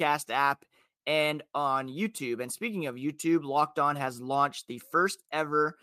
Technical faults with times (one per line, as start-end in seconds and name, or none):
none